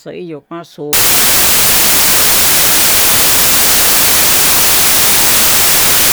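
Samples built from the wrong bytes, from 0.93 s to the end: each sample's bytes are misassembled, so fast-changing low bits dominate, producing loud, harsh broadband noise, close to white on loud sounds.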